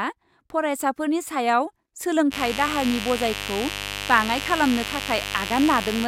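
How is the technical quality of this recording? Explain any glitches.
The recording has a clear technical fault: a mains buzz that sets in at 2.30 s and continues to the end of the clip. It is a steady, raspy buzz sitting roughly 10 dB below the speech. The mechanism is interference from the 50 Hz power supply, where sharp switching spikes from a dimmer, rectifier or poorly shielded cable are picked up twice per mains cycle. Those spikes carry a dense series of 50 Hz harmonics extending well into the kilohertz range, which gives the buzz its edgy, buzzy texture rather than a pure low hum.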